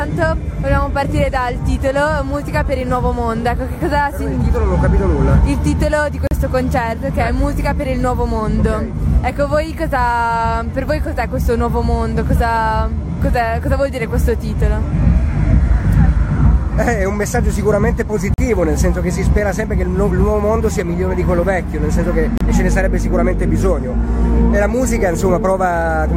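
At 6.27 s the sound drops out for about 40 ms with hard edges on both sides, then at 18.34 s for about 43 ms, and at 22.38 s for about 30 ms. These are gaps between stream segments. The timestamps of adjacent segments don't quite meet, so the player pads the hole with silence. Nothing is actually lost; the audio just gets pushed later. The spacing of the dropouts lines up with 4-second segment boundaries.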